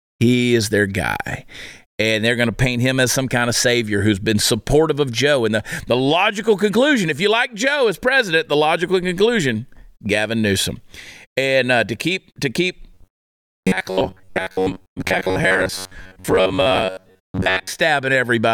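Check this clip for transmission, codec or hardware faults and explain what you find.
There is one fault: robotic sound from repeated short buffers, from 12.94 to 17.70 s, just after "to keep to keep". The speech turns into a rigid metallic buzz at 93.8 Hz. This is likely caused by a stretch of about 10.7 ms being looped while most of the real audio is skipped. A spectrogram shows fixed, evenly spaced harmonic lines, and the waveform shows identical short cycles repeating.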